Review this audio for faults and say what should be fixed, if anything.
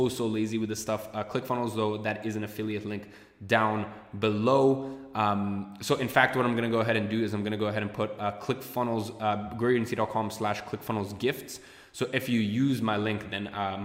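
Nothing in this audio needs to be fixed, as no faults can be heard.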